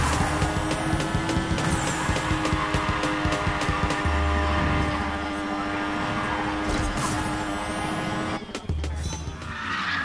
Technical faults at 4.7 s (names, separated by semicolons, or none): wrong sample rate